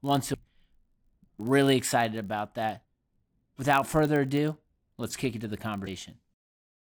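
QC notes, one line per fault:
throughout: block size mismatch (padded). Each block is written a touch short of the 1,024 samples read, and the gap gets zero-filled, so there's a steady buzz at 46.9 Hz, which fits 48 kHz audio. It plays at 0.999x speed, so it's barely slower.
0.33 s, 2.84 s (after "excited about that"), 5.86 s (after "ado let's kick into"): damaged data in a compressed stream. Three brief glitches, each under 20 ms, where the decoder hit corrupt frames, lost sync and skipped ahead to the next good header.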